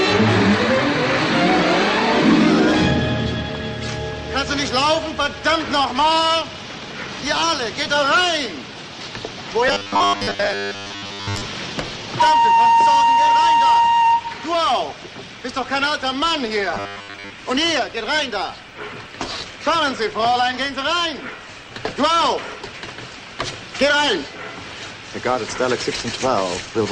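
Robotic sound from repeated short buffers appears from 9.68 to 11.44 s and 16.74 to 17.32 s: a rigid 100 Hz buzz, likely from a 10 ms slice being looped over most of that time, showing as evenly spaced harmonics on a spectrogram and a repeating waveform.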